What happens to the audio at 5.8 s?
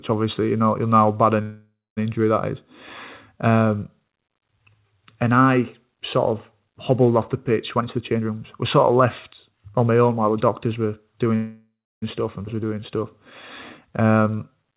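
Nothing goes wrong at 5.8 s: the speech carries on intact, heard through the telephone-band call path, with nothing above 4 kHz.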